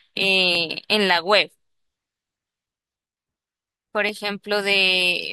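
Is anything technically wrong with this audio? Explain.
Yes. Two sharp clicks occur in this speech, at 0.55 s and 4.09 s. Each is likely dropped samples, where about 0.7 ms of audio goes missing. The waveform jumps abruptly to a later value, producing a single brief tick and a thin vertical line across the spectrum.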